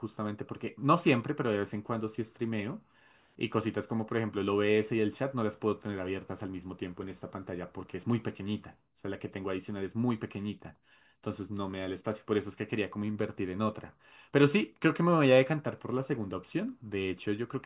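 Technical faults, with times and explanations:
Nothing technical stands out here; the speech carries along without any glitches worth flagging.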